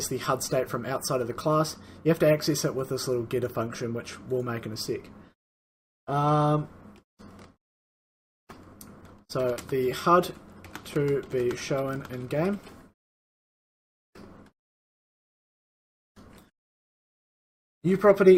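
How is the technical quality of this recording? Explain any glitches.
There is one audible glitch, a short concealed packet loss at 9.53 to 9.58 s. About 20 ms of audio never arrived in time, and the decoder extended the preceding sound to fill the hole, so it comes through as a brief smear or wobble.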